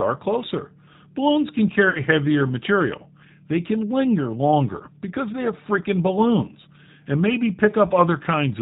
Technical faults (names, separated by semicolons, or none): G.729 codec; VoIP packet loss concealed by the speech codec